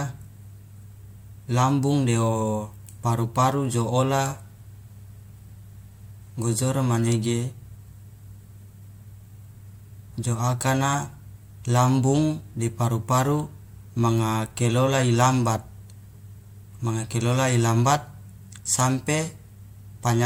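No technical faults can be heard anywhere in the recorded speech.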